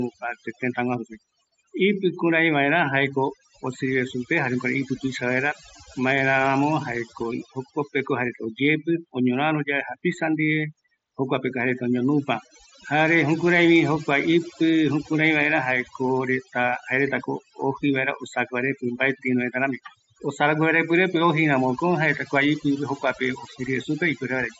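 Speech recorded over what sounds like a wideband Bluetooth headset link (mSBC, with nothing above about 7.7 kHz) carries overdone noise removal from start to finish. The suppressor cuts individual frequency bands hard whenever they sit near its noise estimate, so the background collapses into near silence with twinkling specks and the quieter parts of the voice are stripped away. On a spectrogram, the gaps between phrases show isolated bright dots scattered on a dark field, and the voice itself looks ragged, with holes punched out of its weaker harmonics. On the waveform, the pauses sit almost flat.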